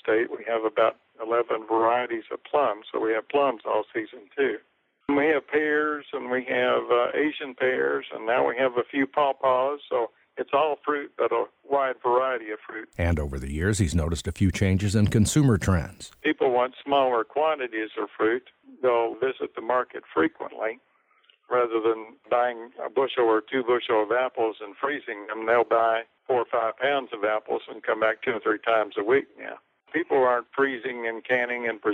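No technical faults can be heard anywhere in the audio.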